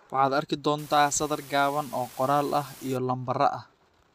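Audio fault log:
0.78–2.97 s, unreliable data bit: a marginal data line flips one bit in a random share of samples, so each error adds an identical spike, about -35 dBFS in size, heard as a steady fizzing crackle that continues through the pauses in the speech.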